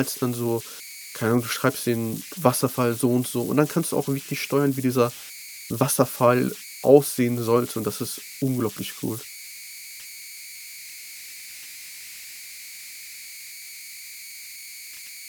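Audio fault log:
Throughout: converter idle tones, a whistle somewhere around 2 kHz in the pauses and a grainy hiss under the speech, sitting about 17 dB below it. An undithered delta-sigma converter locks into repeating bit patterns on small inputs, and those patterns come out as tones.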